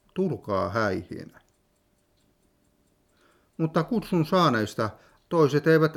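Nothing in this audio reveals any technical fault.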